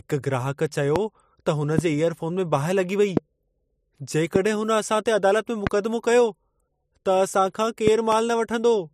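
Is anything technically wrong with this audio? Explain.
Yes. Sharp pops cut through the speech at 0.96–0.98 s, just after "ग्राहक चयो", then at 1.78–1.81, 3.17–3.19, 4.36–4.38 and 5.67–5.69 s, and as a quick double pop between 7.87 and 8.15 s. These are loud pops, each peaking roughly 15 dB above the speech, with the speech carrying on unbroken underneath. The likely cause is a brief voltage step or spike, such as static or a switching glitch, entering the signal path and being shaped by the circuitry after it into a thump.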